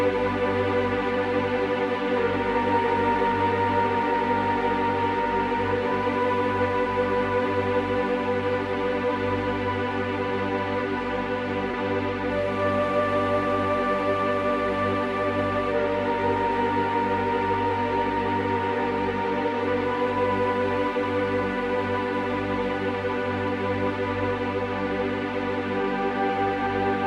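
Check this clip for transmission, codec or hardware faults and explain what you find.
One fault stands out: a brief smear or wobble at 11.71 to 11.75 s. It is short concealed packet loss: about 20 ms of audio arrived too late, so the receiver extended the preceding sound to fill the gap, then crossfaded back into the real signal.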